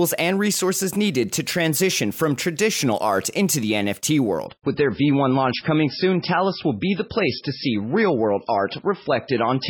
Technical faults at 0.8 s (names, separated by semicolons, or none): none